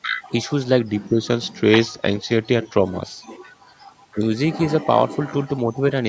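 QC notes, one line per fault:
0.89–2.84 s: drift correction step. The clock-matching stage likely stepped the playback rate down by about 5.6% to rebalance its buffer, so the speech slows and drops a full semitone, 100 cents, for nearly two seconds, then snaps back to normal speed and pitch.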